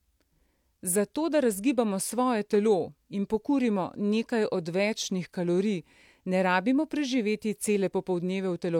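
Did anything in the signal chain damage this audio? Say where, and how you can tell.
No, nothing in the signal chain damaged this speech.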